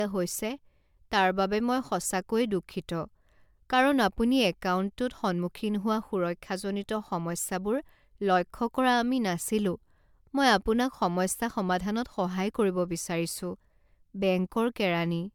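Generation loss runs through the whole speech clip, from start to finish. The sound is more swirly and hollow than a single MP3 pass at a rate around 135 kbit/s should give, with consonant attacks smeared and nothing above 20.1 kHz. The likely cause is repeated lossy coding, around five MP3 decode-and-encode passes. Each pass requantises on a shifted frame grid, so noise and spectral holes accumulate rather than staying fixed.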